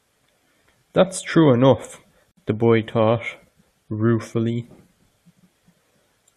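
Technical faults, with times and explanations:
2.31–2.37 s, gap at a join of encoded pieces: the speech stops for 56 ms with smeared edges, then resumes exactly where it left off. Unlike a dropout, nothing is lost. Untrimmed encoder start delay and end-frame padding were left at a join between separately encoded pieces about 6 s long.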